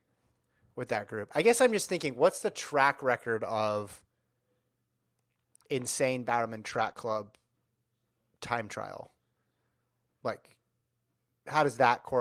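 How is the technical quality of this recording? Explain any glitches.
The recording has two kinds of network-loss damage, both in the transmission path.

Lost packet rebuilt from error correction, at 0.93 to 0.95 s just before "group I guess I'm", then 6.69 to 6.91 s and 6.97 to 7.19 s. Packets went missing, but each following packet carried a low-bitrate backup copy, which the decoder played instead. Nothing drops out. Those stretches turn coarser and noisier, briefly at 0.93 s and for about 0.2 s each across the two longer runs, which point to six lost packets each.

Short concealed packet loss, at 6.93 to 6.97 s, wedged between the two rebuilt runs. Here no backup arrived in time, so the receiver extrapolated the preceding sound, carrying its pitch forward or filling with shaped noise, before crossfading into real audio again. It comes across as a quick smear or wobble within that half-second patch around 7 s.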